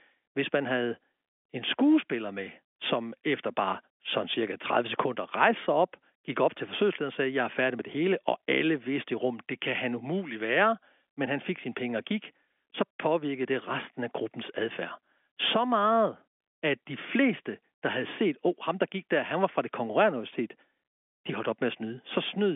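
It's a speech recording carried over ordinary G.711 telephone coding, so it has the familiar narrow phone-line band of roughly 250 Hz to 3.5 kHz, and there's nothing technically wrong with it.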